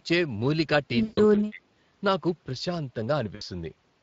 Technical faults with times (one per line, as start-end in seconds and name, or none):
0.00-4.03 Speex codec
1.03-1.19 VoIP packet loss concealed by the speech codec
1.30-1.63 speech suppressed in double talk
3.35-3.42 VoIP packet loss concealed by the speech codec